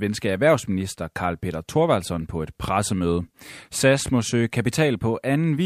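No technical faults are audible anywhere in the speech recording.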